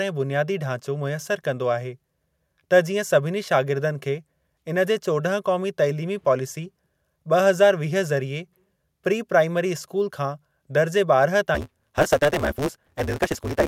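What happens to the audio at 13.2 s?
At 13.2 s the speech is hurried along at about 1.6 times its normal pace, yet stays near its usual pitch, with a steady 150 Hz buzz running underneath. It is a block size mismatch (truncated), lasting from 11.54 s to the end at 13.68 s. One stage hands over longer blocks than the next stage takes in, so the tail of every block is discarded. That fits 512-sample blocks being cut to roughly 320. The buzz is the rate of those regular cuts.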